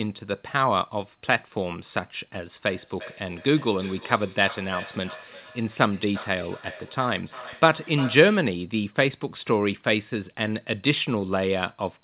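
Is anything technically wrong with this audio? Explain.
Yes. Feedback echo between two devices runs from 2.68 to 8.58 s. A second device on the same call replays this speech into the room, its microphone catches it again, and neither echo canceller removes the other's playback. Each phrase returns roughly every 400 ms, thinner and ringing, peaking at about 16 dB below the speech.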